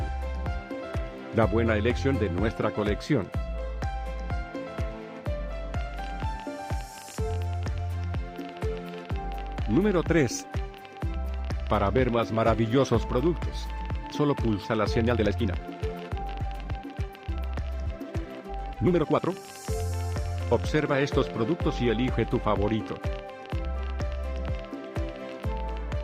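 From 5.81 s to the end at 26.02 s, an uneven ticking and popping runs over the sound and through its pauses, around 11.8 clicks per second and a few hundred in all, peaking about 5 dB above the audio. This train of clicks likely comes from interference or a faulty connection or power supply injecting similar pulses.

Between 15.08 s and 19.50 s the pace suddenly turns rushed, running 1.65 times faster while the pitch stays put. This time-stretched section was likely squeezed to fit by software that dropped short pieces to keep the pitch.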